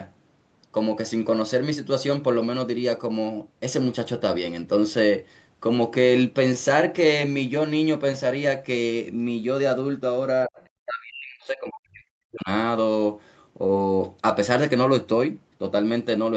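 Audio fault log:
10.46–12.48 s, speech suppressed in double talk: the talker drops sharply, by roughly 40 dB at its deepest, for about two seconds. This is likely an echo canceller, unable to tell near speech from loudspeaker echo while both sides talk, turning both down together.
10.62 s, other side's voice leaking through: a brief scrap of a second voice, far below the talker at roughly 40 dB down, slips into the microphone signal. This is likely loudspeaker playback that the echo canceller failed to remove completely.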